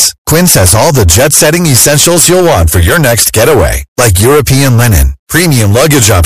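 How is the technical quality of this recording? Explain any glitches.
Poor: the recording suffers from hard clipping for its whole length. Somewhere in the chain the speech was driven roughly 15 dB beyond what a stage could pass, so around a fifth of the samples hit the ceiling and had their peaks sliced flat. Those squared-off tops generate harmonics reaching well up the spectrum, and because the overload is this heavy, the damage isn't limited to occasional crackle. Every loud syllable carries a harsh, buzzing fuzz.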